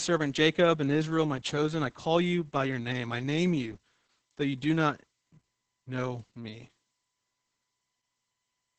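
From start to finish the speech carries Opus voice compression damage, and it's heavy. The sound points to the SILK speech coder running in wideband mode at a low rate, something like 10 kbps. At that rate SILK can only describe the excitation very coarsely, so the voice comes out muffled and hoarse, with a slightly robotic edge. It's a steady smearing of detail across the whole clip rather than a dropout at any one moment.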